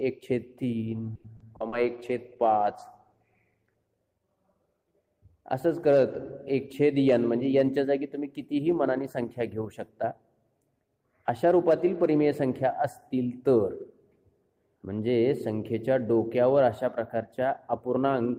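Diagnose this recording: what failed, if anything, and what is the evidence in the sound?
Repeated packet loss (robotic sound) runs from 1.15 to 1.75 s, a network fault. Four separate holes open in the audio, the longest about 90 ms. The receiver patches them by stretching the preceding sound, which accounts for about 210 ms of the stretch, roughly 35 percent of it. Another 120 ms is simply missing. The result is a choppy texture with pieces of the sound gone.

A call bitrate drop follows at 1.87 s and lasts until 4.18 s. This is a network-driven codec change. The bandwidth estimate fell and the encoder was pushed from 32 kbps down to 15 kbps, staying at the bottom for about 1.48 s. With roughly half the bits, the codec quantises more coarsely and trims the upper frequencies. That explains why the sound turns rough and dull here before clearing as the rate climbs back.

A jitter buffer speed-up occurs between 11.29 and 12.70 s, at the receiver's playout stage. 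The buffer had accumulated more audio than its target, so it repeatedly cut out short pitch-period segments to shed the excess. Altogether about a tenth of a second is removed. Playback runs at about 106 percent speed without any pitch change, so this passage sounds slightly hurried.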